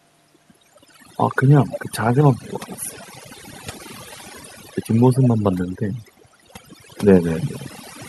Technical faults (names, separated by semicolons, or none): overdone noise removal